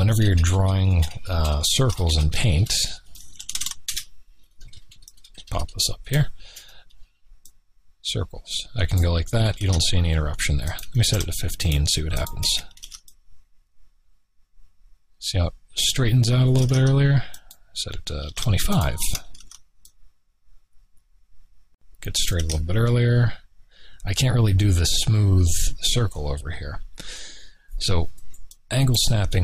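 Nothing is technically wrong with this audio.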